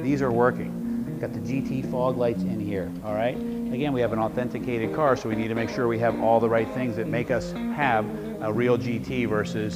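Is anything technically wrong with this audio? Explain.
No, nothing technically wrong can be heard here.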